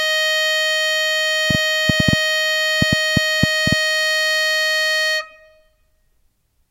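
A music clip with a train of clicks from 1.5 to 3.73 s: around ten similar pops at about 5 per second, unevenly spaced, peaking roughly 20 dB above the music. The likely cause is nearby interference or a faulty connection or power supply. On a spectrogram they appear as thin full-height vertical lines, and in the waveform as sharp spikes.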